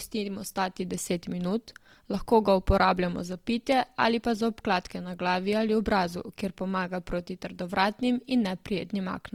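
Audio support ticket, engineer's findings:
Opus compression, throughout. Speech is grainy and rough, with harmonic parts turned noisy; the damage is plainly audible. Likely cause: Opus in its music (CELT) mode at a rate fitting 24 kbps, filling starved bands with folded or noise energy. Spectrogram: fullband up to 20.2 kHz, few holes, smeared, speckled harmonics.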